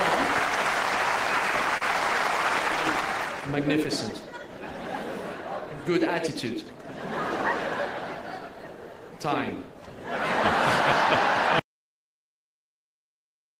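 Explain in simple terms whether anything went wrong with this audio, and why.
Short concealed packet loss at 1.77 to 1.83 s: a small piece of the audio arrived too late to be played. The receiver covered the hole by stretching the sound just before it, so you hear a brief smear or wobble lasting about 50 ms.

An audio dropout to silence begins at 11.59 s and lasts to the end. The sound cuts off completely, leaving dead silence with no background noise at all. The input was likely lost, through a disconnected device, a broken link or an accidental mute.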